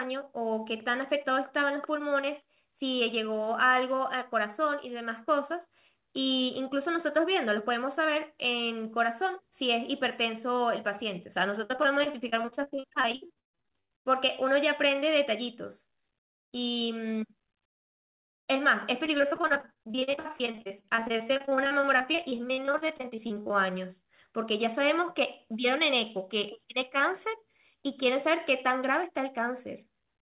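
Speech, with repeated packet loss (robotic sound) from 11.64 to 13.92 s and again from 19.06 to 23.51 s. Dozens of short gaps, up to 138 ms, are bridged by extending the previous sound, giving a choppy texture rather than the clean silence of a single dropout.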